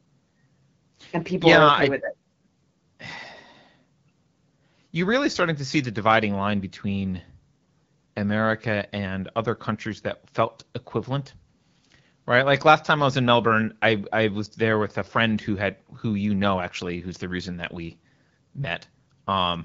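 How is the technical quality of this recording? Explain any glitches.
No glitches can be heard anywhere in this recording.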